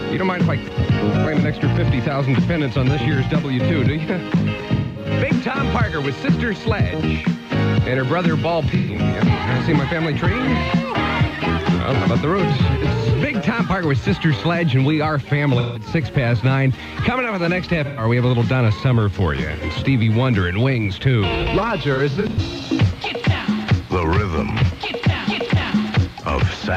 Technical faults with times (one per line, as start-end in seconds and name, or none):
4.74-5.11 AAC frame loss with concealment
8.76-8.95 AAC frame loss with concealment
15.58-15.86 AAC frame loss with concealment
17.84-18.04 AAC frame loss with concealment
21.94-22.39 AAC frame loss with concealment